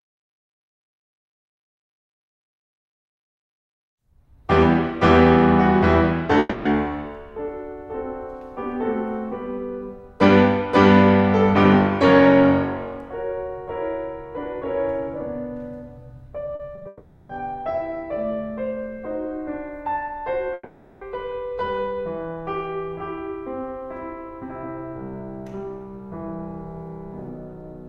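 Music with three long network dropouts at 6.39–6.67 s, 16.87–17.31 s and 20.53–21.03 s, each likely a stretch where no packets arrived. The last sound is stretched into a fading buzz, showing on a spectrogram as smeared, frozen horizontal bands. Just before the second dropout, repeated packet loss (robotic sound) from 16.55 to 16.87 s patches four gaps of up to 40 ms, giving a choppy texture and a stuttering, notched waveform envelope.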